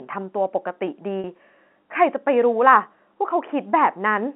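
At 1.21 to 1.24 s, packet loss with pitch repetition: about 40 ms went missing, which fits two lost 20 ms packets. The receiver repeated the last pitch period, so the speech briefly holds a slightly buzzy tone instead of dropping to silence or clicking, as a plain dropout would.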